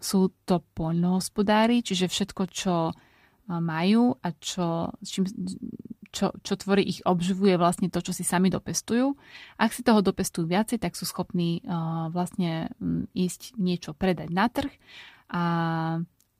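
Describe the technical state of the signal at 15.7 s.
At 15.7 s the speech signal is intact, with no dropout, clipping, glitch or other fault to be heard at that moment.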